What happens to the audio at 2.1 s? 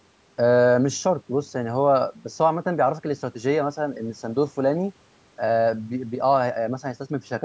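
Nothing goes wrong at 2.1 s: the speech there carries on intact, with only the ordinary call microphone processing shaping it, its high-pass filter trimming the deepest bass and its bandwidth stopping at 8 kHz.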